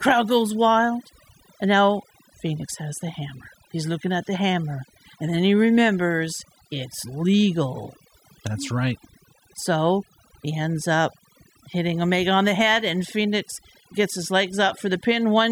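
Across the whole recording, the gaps between phrases fall to near silence scattered with twinkling specks. These are the marks of overdone noise removal: a noise reduction process set far too aggressively on a noisy source. Any frequency band close to its noise estimate was pushed down or shut off, and the quieter parts of the speech were stripped away together with the noise.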